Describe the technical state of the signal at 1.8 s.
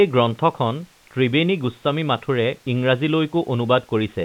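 At 1.8 s the speech is intact, with no fault present, only the narrow, telephone-like band of G.711 telephone coding that passes nothing above 4 kHz.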